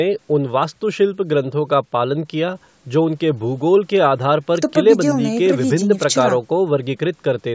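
No technical faults can be heard anywhere in the speech. It has passed through a call's microphone processing, which trims away the lowest bass and leaves nothing above 8 kHz, as such a path normally does.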